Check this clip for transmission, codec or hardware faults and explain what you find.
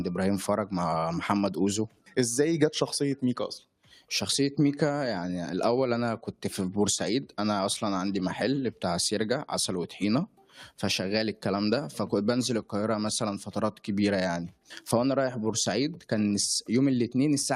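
The faults here come from processing rather than transmission or hardware: a speech-oriented noise suppressor is acting on non-speech audio throughout, and in four places it cuts the sound hard.

The noise suppressor applied to music or sounds runs for the whole clip. Built to separate a voice from background noise, it treats sustained, steady material as noise and attenuates it, letting onsets pass. The level therefore swings by roughly 5 dB, with held portions and decays sinking and pumping. Codec artefacts would add swirly, watery texture instead.

The sound cut by the noise suppressor occurs at 1.88–2.17 s, 3.63–4.10 s, 10.27–10.55 s and 14.51–14.69 s. Each time the suppressor misjudges a stretch as noise and pulls it down by up to about 12 dB, so a sustained part or tail suddenly thins and drops away for a few tenths of a second. Packet loss or a dropout would produce abrupt silence or a click. 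These are smooth gain dips, and transients inside them still come through.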